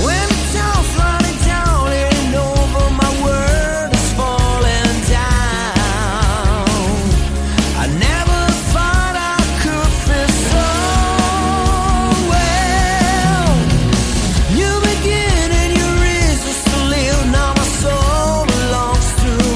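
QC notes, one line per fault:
No faults are heard anywhere in this audio. There is nothing to log.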